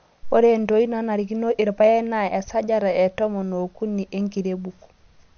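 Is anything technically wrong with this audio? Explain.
Yes. Throughout the speech there is a hard ceiling on the treble, with nothing above about 6.5 kHz, and the remaining sound has a watery, swirling quality with smeared consonant attacks. This is likely MP3 compression at a low rate, which fits something near 48 kbps. Short of bits, the encoder cuts off the high band and drops weak frequency lines that come and go between frames, which produces the plainly audible warbling and dull, muffled sibilants.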